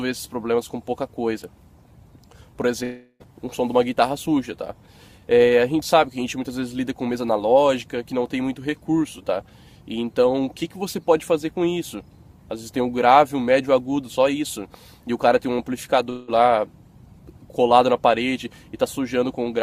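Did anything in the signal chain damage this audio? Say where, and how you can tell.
Yes, at the network. At 2.83–3.23 s and 16.10–16.31 s, sound smears into a fading buzz, then resumes with audio skipped. Likely a long network dropout.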